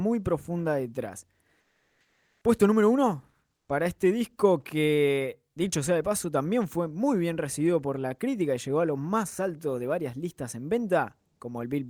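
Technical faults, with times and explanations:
1.60–2.44 s and 3.56–3.69 s: comfort noise in place of the background after "profunda detrás" and "número uno". The pauses become flat, featureless hiss about 6 dB and about 3 dB quieter, likely from discontinuous transmission. On a spectrogram these stretches show smooth, uniform noise without background detail.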